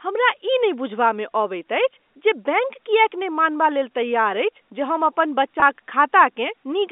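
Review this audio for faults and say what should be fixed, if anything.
Packet loss with pitch repetition at 5.60 to 5.62 s: about 20 ms of audio, which fits a single lost packet, was bridged by repeating the last pitch period, so the sound briefly holds with a slight buzz inside the G.711 telephone band of 250 Hz to 3.6 kHz. Adding a jitter buffer with forward error correction or redundant packets on the link would prevent it.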